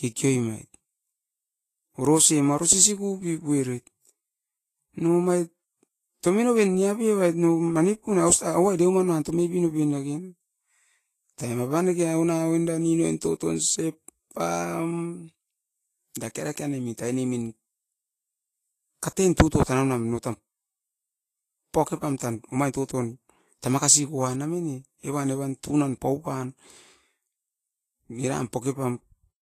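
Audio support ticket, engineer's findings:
Hiss and grain on the speech for the full clip, consonants smeared, treble roughened. Nothing above about 14.2 kHz. Likely Vorbis compression at a low setting, fitting something near 30 kbps. The encoder quantises the upper residue so coarsely that fine detail turns into noise of similar energy, hence the grainy top. Codec damage plainly audible throughout.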